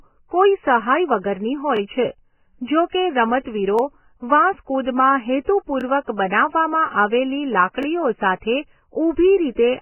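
From the start, the speech sounds dull, hissy and grainy, with nothing above 3 kHz and smeared consonant onsets. This is likely heavy Vorbis compression at a very low bitrate, near 10 kbps, where the treble is cut and coarse quantisation turns fine detail into noise.

At 1.77, 3.79, 5.81 and 7.83 s, a short stutter or click recurs every 2.0 s. These are overlapping chunks: each 2-second chunk begins about 21 ms before the previous one ended, so that sliver of sound plays twice at every join.

At 9.55 to 9.57 s, a brief hiss runs ahead of a sharp attack, which sounds softened. This is pre-echo. The codec spread its quantisation noise across the whole transform block, so noise sized for the loud onset leaks about 24 ms into the quiet moment before it.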